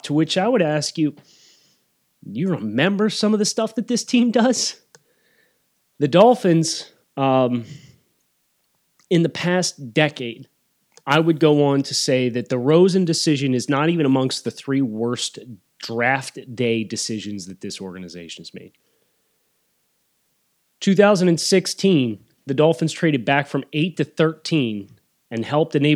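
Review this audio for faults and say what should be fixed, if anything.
No faults; nothing to fix.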